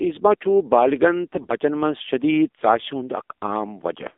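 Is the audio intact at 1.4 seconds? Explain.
No. At 1.4 seconds the sound sits inside a burst of AMR bit errors running from 1.33 to 1.53 s. Some of the weakly protected bits in the mobile frames arrived flipped, but the frames were still accepted and decoded. The excitation pulses land in the wrong places, and the fine pitch, gain and spectral values drift. Pitch and level hold roughly steady, yet the sound turns hoarse, scratchy and gargly. The damage spans eleven 20 ms frames, which fits an error rate of a few percent.

That burst also sits on top of the AMR narrowband mobile codec, which colours the whole clip. Only the band from 250 Hz to 3.6 kHz comes through, so the sound is thin and muffled. The codec rebuilds speech from a vocal-tract model driven by a few pulses per frame. Its plainly audible buzzy, synthetic quality points to a low bitrate, around 7.4 kbps.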